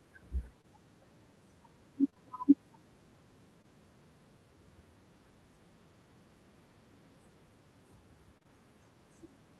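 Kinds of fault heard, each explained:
Short concealed packet loss: 20 ms chunks of speech went missing and were patched with extrapolated sound, heard as brief smears or wobbles; spectrograms show short smeared harmonic patches.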